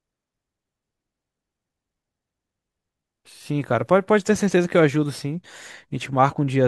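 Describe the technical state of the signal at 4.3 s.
At 4.3 s the audio is intact, with no audible dropout, clipping, glitch or other technical fault at that point.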